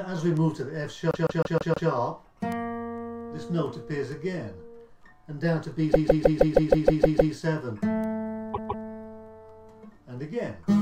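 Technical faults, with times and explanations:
1.11–1.90 s, 5.92–7.33 s and 8.53–8.84 s, repeated frames: a 157 ms block of compressed frames, which fits a run of six frames, was resent, so the decoder loops it five, nine, then two extra times, a stutter that lengthens the audio.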